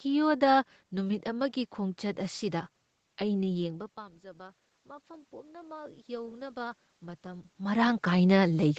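From 3.63 s to 8.09 s, automatic gain rising: after the input falls by about 17 dB as the talker moves back, the gain control slowly adds about 8 dB, swelling speech and room noise together. The waveform envelope climbs steadily, and the spectrogram's noise floor brightens alongside.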